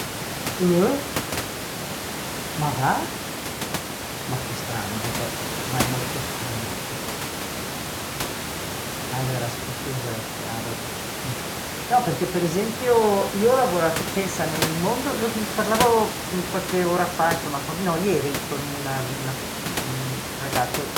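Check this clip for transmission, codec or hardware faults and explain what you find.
Nothing stood out on listening to the speech, apart from the room's own background noise sitting about 10 dB below it, which belongs to the recording rather than to any transmission, codec or hardware path.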